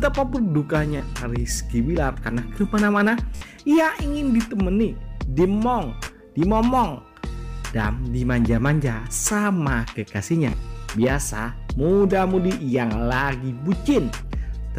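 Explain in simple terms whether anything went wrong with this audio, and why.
Something did go wrong: Bluetooth stutter at 0.97, 3.36 to 3.42, 6.05 and 10.50 to 10.53 seconds. The wireless link briefly lost data, so the player repeated its last tiny slice. That makes a quick buzzy flutter rather than a silent gap, and then the sound jumps ahead.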